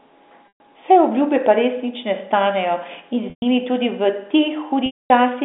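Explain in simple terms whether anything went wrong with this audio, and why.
Speech drops out three times here, at 0.48, 3.30 and 4.86 s. That's packet loss with pitch repetition: pieces of the call got lost, so the receiver briefly echoes the last bit of voice, fades it, then goes quiet. The gaps last 0.12, 0.12 and 0.24 s.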